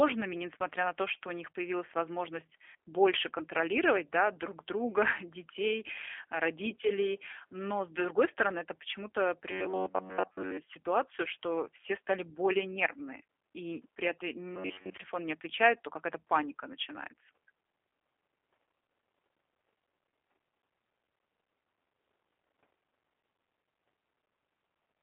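The whole clip passes through the G.729 codec at 8 kbit/s. Nothing above 3.6 kHz survives. The speech sounds rough, narrow and plainly synthetic.

From 9.52 to 10.59 s, just before "ситуацию что все стали", and from 14.55 to 14.97 s, between "нервные и при этом" and "не отвечают то", the voice becomes a rigid metallic buzz at 93.8 Hz. This is robotic sound from repeated short buffers. It is likely caused by one roughly 10.7 ms stretch of audio being replayed over and over while most of the real audio is skipped.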